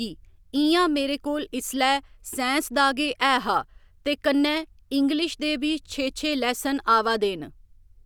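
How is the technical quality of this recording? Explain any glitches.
No technical glitches are audible anywhere in the recording, so there is nothing to diagnose.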